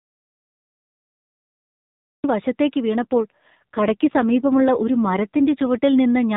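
The recording opens in an audio dropout to silence that is already under way and lasts until 2.24 s: silence with no room tone, the signal likely lost upstream while the recorder kept writing empty samples. Speech then resumes mid-flow, and anything spoken during the gap is gone.

From 3.02 s to 5.78 s there is an AMR rate drop. The bandwidth stays the same, still capped at 4 kHz like the rest of the narrowband mobile audio, and there is no break, but the voice turns rougher and more synthetic. This fits the codec stepping down from 12.2 to about 5.9 kbps and coming back up afterwards.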